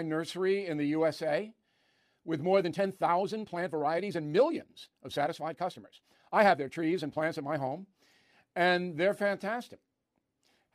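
Speech with a time-stretched section from 2.60 to 7.58 s, where the pace jumps to about 1.45 times normal while the pitch holds steady. The passage sounds rushed, likely from software compressing that stretch by dropping short pieces of audio to fit a shorter length.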